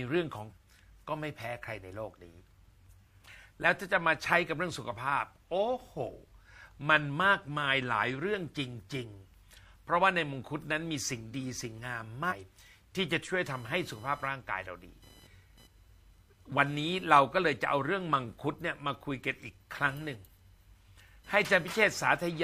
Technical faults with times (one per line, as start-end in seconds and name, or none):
0.47-0.53 damaged data in a compressed stream
12.26-12.33 damaged data in a compressed stream
13.44-22.43 computer activity noise